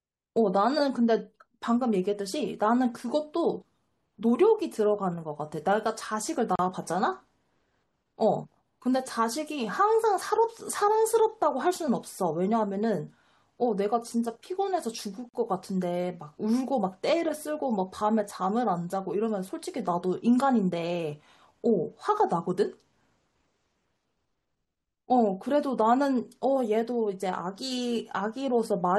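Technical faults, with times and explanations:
6.56–6.59 s and 15.29–15.34 s, gap at a join of encoded pieces: the speech breaks off for 36 ms and then 47 ms, and each time it resumes exactly where it left off. Two separately encoded segments were butted together untrimmed, so one encoder's end-frame padding and the next one's start-up delay sit in the stream as silence. Unlike a packet dropout, no material is lost, and the edges are smeared by the codec.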